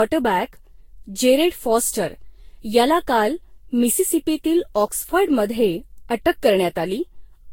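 Across the whole speech clip the sound is swirly, smeared and hollow, with blurred attacks and nothing above 16.6 kHz. That points to generation loss, likely from around ten successive lossy encodes near 62 kbit/s, each requantising on a shifted frame grid.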